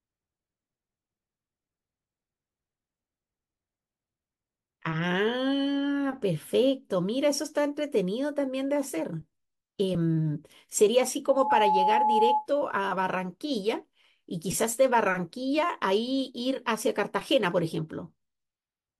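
Speech with a loudspeaker feedback squeal from 11.27 to 12.47 s: a steady 853 Hz tone swells over about a third of a second to roughly 5 dB above the speech, as a microphone re-amplifies its own loudspeaker. A spectrogram shows one bright horizontal line.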